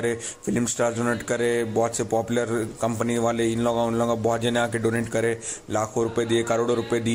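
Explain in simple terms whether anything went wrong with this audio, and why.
Nothing went wrong here: I listened all the way and didn't hear a single glitch, dropout or odd noise to point to.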